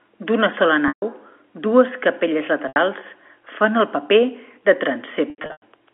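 Packet loss with pitch repetition hits at 0.88 s (140 ms), after "dues capelles" at 2.68 s (80 ms), and after "fan el paper de" from 5.3 to 5.62 s, where gaps totalling 240 ms are scattered, the longest 100 ms. The receiver loops the last pitch period, giving a held, buzzy tone. On a spectrogram it shows as frozen flat harmonics. In the waveform it appears as identical repeating cycles that fade down within the narrow telephone band.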